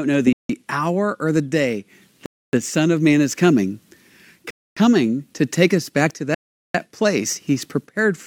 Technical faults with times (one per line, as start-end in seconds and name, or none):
0.33-0.49 Bluetooth stall
2.26-2.53 Bluetooth stall
4.50-4.77 Bluetooth stall
6.34-6.74 Bluetooth stall